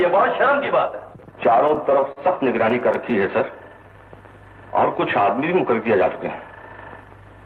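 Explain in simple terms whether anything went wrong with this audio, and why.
Something did go wrong, in four places, all caused by audio arriving unevenly over a call connection that used the Opus codec.

Repeated stalls (stutter) happen from 1.13 to 2.18 s and again from 2.58 to 3.12 s. The receiver ran out of audio nine times in the first stretch and five in the second, and each time it stretched the last sound until more arrived. The longest hold is 44 ms. Unlike a dropout, nothing is lost; the sound just catches and drags.

A jitter buffer slow-down follows from 3.51 to 3.93 s. To rebuild its reserve, the receiver repeated tiny pieces of sound, adding 64 ms. That part plays at 86% speed with the pitch unchanged, which is how it differs from a slowed recording, where the pitch would also drop.

A jitter buffer speed-up occurs from 6.47 to 6.69 s. Too much audio had piled up, so the receiver trimmed about 40 ms in many small cuts. 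That part plays at 114% speed, sounding hurried at the same pitch. Unlike a skip, no single chunk is missing.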